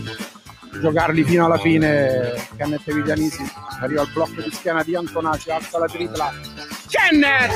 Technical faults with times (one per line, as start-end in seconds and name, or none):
0.00-7.56 noise suppressor applied to music or sounds
0.25-0.75 sound cut by the noise suppressor
4.07-4.66 sound cut by the noise suppressor
6.32-6.91 sound cut by the noise suppressor